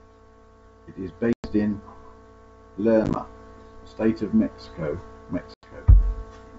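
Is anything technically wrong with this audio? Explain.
Yes. Speech drops to hard-edged silence at 1.33 to 1.54 s (110 ms lost), 3.04 to 3.16 s (60 ms in gaps of up to 10 ms over 120 ms) and 5.54 to 5.70 s (90 ms), returning slightly distorted for a short while. This is packet loss on an ADPCM call: the G.722 decoder's predictor and step size drift from the sender's until they realign.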